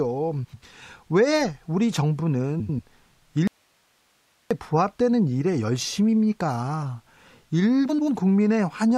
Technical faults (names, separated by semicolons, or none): frames out of order; audio dropout to a faint residue